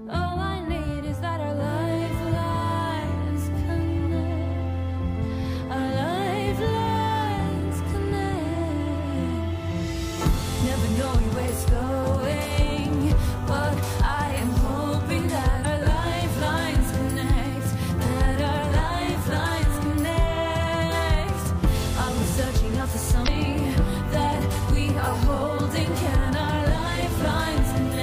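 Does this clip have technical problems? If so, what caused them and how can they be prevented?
Yes, two brief glitches at 15.61–15.66 s and 23.24–23.28 s come from damaged data in a compressed stream, where corrupted bytes made the decoder lose sync. Checksummed transfers and clean stream sources would prevent it.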